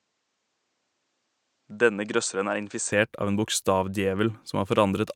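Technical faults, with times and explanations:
0.00–2.92 s, input switched to a poorer device: likely a lesser microphone at first, so sound is duller and about 5 dB quieter, with nothing above 8.8 kHz, until it clears before "av en".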